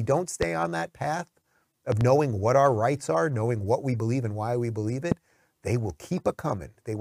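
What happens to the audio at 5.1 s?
A single sharp loud pop, well above the speech level, lands from 5.12 to 5.14 s, right after "and why we believe", while the speech continues underneath. It is likely caused by a sudden voltage pulse from a plug, switch, static or driver glitch entering the signal path.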